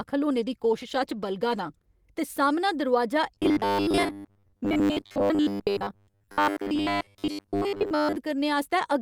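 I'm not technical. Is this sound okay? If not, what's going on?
No. Two problems show up in this speech.

From 0.35 to 2.05 seconds there is a call bitrate drop. The call's connection briefly had less room, so the voice was squeezed into far less data. It was packed more crudely. That makes the speech sound rougher and less clear for those couple of seconds. The worst stretch lasts about 1.6 seconds. Then the quality comes back.

From 3.35 to 8.16 seconds you hear robotic sound from repeated short buffers. The voice turns into a stiff, metallic buzz. The buzz sits at a steady 100 Hz, a low hum. It follows the original speech only roughly. The likely cause is fresh audio arriving too rarely. The software filled the gaps by replaying tiny 10 ms snippets over and over. That covered most of this stretch.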